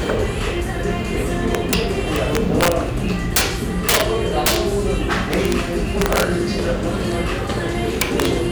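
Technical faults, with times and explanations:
1.55–1.74 s, 2.16–2.72 s, 3.36–3.41 s, 3.89–4.01 s, 4.46–4.56 s, 5.34–5.52 s, 6.02–6.23 s, 8.01–8.26 s: integer overflow. Peaks driven about 1 to 18 dB past full scale wrap to the opposite extreme instead of limiting, so each loud moment produces harsh, violent cracks far sharper than clipping. The worst are at 3.89 s and 4.46 s, about 18 dB over.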